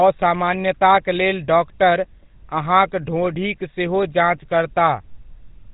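The whole of this speech clip has the buzzy, gravelly roughness of the GSM full-rate codec, plainly audible throughout and consistent with its 13 kbps rate. The coder rebuilds the voice from a vocal-tract filter driven by a sparse, regularly spaced pulse excitation, and that coarse excitation produces the grit. Nothing passes above 3.8 kHz. A plain telephone band-limit would dull the sound in the same way but leave it smooth, without this rasp.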